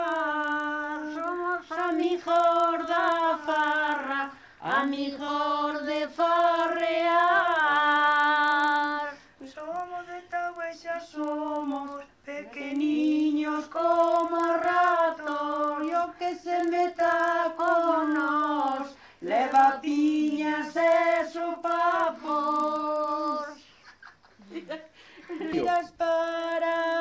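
A buzz at 25 Hz runs through the whole recording, from a resampler restarted on every block. Each 40 ms block was converted from 44.1 kHz to 16 kHz alone, leaving an edge error. Unlike mains hum, it is present only with signal.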